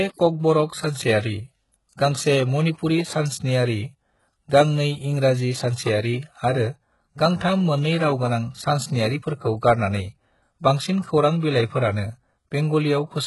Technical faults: HE-AAC compression

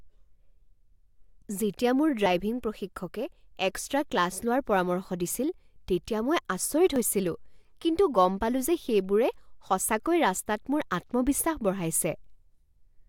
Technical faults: dropped buffer (overrun)

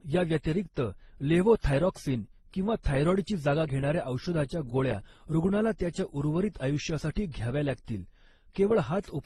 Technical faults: transcoding between lossy codecs

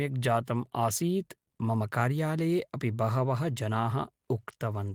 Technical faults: none

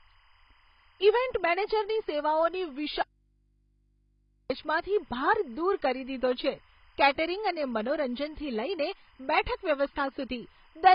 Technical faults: timecode bleed; AAC compression; audio dropout to a faint residue

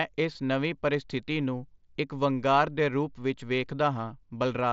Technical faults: concealed Bluetooth headset packet loss

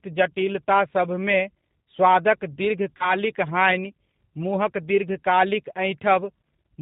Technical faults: G.729 codec; VoIP packet loss concealed by the speech codec

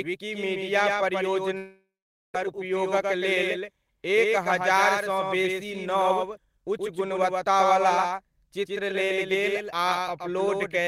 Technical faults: doubled audio track; long network dropout; jitter buffer speed-up; dropped buffer (overrun)

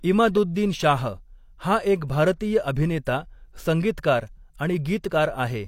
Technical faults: pre-echo

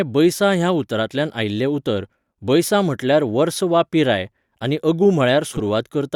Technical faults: frames out of order

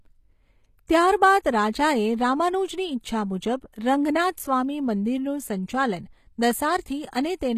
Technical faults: HE-AAC compression

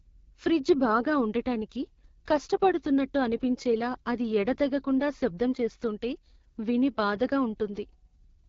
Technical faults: AMR wideband (HD Voice) codec

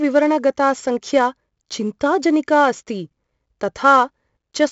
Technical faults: 4-bit ADPCM compression

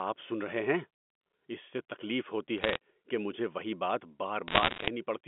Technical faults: bit errors on a digital phone line

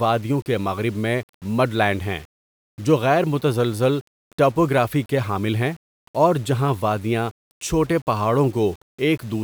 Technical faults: low bit depth without dither

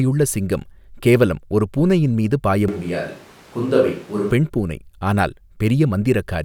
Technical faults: switch to a distant microphone

